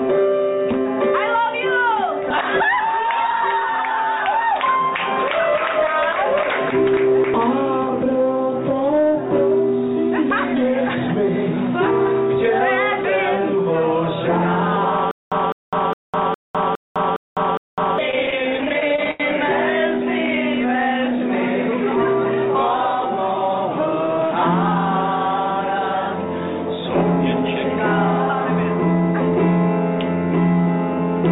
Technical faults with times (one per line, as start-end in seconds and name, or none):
2.30 dropped buffer (overrun)
3.69 dropped buffer (overrun)
7.34 dropped buffer (overrun)
10.30 dropped buffer (overrun)
14.76 dropped buffer (overrun)
15.11-17.98 stutter with silent gaps
18.11-19.23 repeated stalls (stutter)